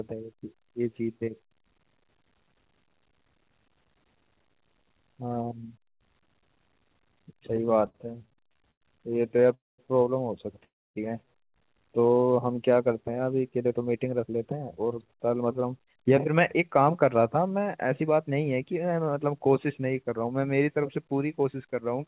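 From 7.86 to 9.46 s there's a run of repeated stalls (stutter): the jitter buffer keeps running dry, so the receiver stretches the last bit of sound over a string of short holes, the longest about 104 ms. Roughly a fifth of that stretch is filler, so the audio drags and judders, though nothing actually goes missing.

Right after, at 9.54 to 9.80 s and again at 10.64 to 10.98 s, you get a call audio freeze, likely packets held up in transit. Each one is a brief fading buzz that drops into near-silence (about 200 ms the first time, 280 ms the second) before the audio resumes where it left off, adding a gap of 242 ms and 313 ms.

Then from 13.58 to 17.36 s there's a jitter buffer speed-up. The buffer is cutting back excess stored audio by trimming tiny pitch-period slices, about 0.4 s all told, so the audio runs at 110% speed with the pitch unchanged and comes across as rushed. All of this sits on a narrowband path with nothing above 4 kHz.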